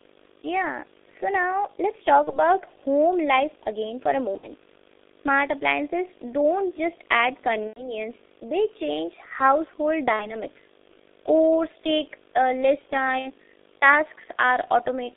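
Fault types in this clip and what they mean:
Video or display buzz: interference from a screen or video cable leaking into the audio path, heard here as a steady 50 Hz field-rate buzz with hash above it plus a whine at 15.6 kHz from the line rate, sitting roughly 25 dB below the speech throughout.
G.723.1 codec: a low-rate internet-telephony codec working in 30 ms frames at about 6.3 kbit/s. The speech is confined to roughly 300 Hz to 3.6 kHz and heavily damaged, sounding muffled and hoarse with smeared consonants for the whole clip.
VoIP packet loss concealed by the speech codec: lost packets were replaced by the decoder stretching its last pitch and filter with falling gain. Dropouts near 2.24, 4.37, 7.67, 10.13 and 13.19 s turn into a fading buzzy tone or coloured noise, with the voice weak for a while afterwards.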